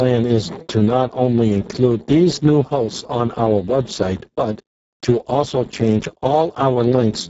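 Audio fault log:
throughout: Speex codec. The speech sounds hoarse, grainy and heavily processed, edging toward a robotic buzz, and the top of the spectrum is a hiss-like wash that stops at about 7.7 kHz. The damage points to Speex running at a very low bitrate, roughly 6 kbps, which starves the excitation signal of bits and leaves the voice rough and synthetic. Above about 4 kHz the codec has no real detail, only shaped noise filling that band.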